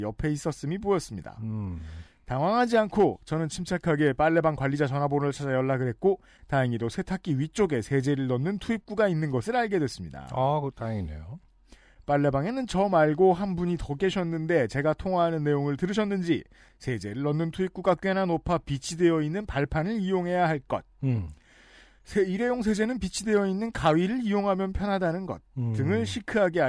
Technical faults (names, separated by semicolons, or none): none